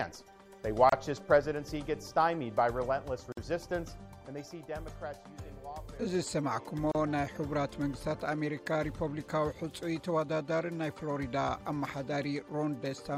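Three short dropouts at 0.89 s (30 ms), 3.32 s (48 ms) and 6.92 s (33 ms): a gap at a join of encoded pieces, where leftover encoder padding briefly silences the sound before it resumes.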